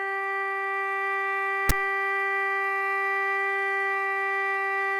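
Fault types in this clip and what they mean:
File tags played as audio: tag text and zero padding decoded as samples, giving a hard-edged rasp from 1.69 to 1.72 s. It appears as a broadband spectrogram stripe and an offset-then-flat waveform.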